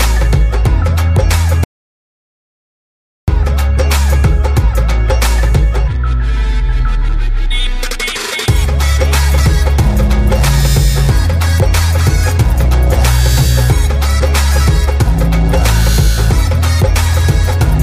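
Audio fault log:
1.64–3.28 s audio dropout to silence: the sound cuts off into silence with no room tone for about 1.6 s, likely from input lost while recording continued.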